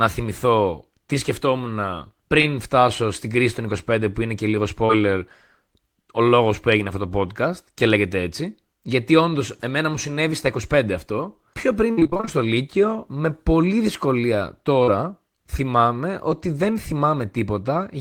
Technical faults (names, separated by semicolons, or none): short concealed packet loss; repeated packet loss (robotic sound)